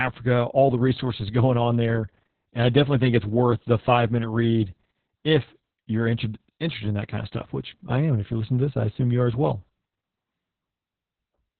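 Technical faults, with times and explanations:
Throughout, Opus voice compression: a low-rate narrowband SILK encoding, likely around 6 kbps, discards everything above about 4.3 kHz and coarsely codes excitation, leaving speech muffled, hoarse and slightly robotic.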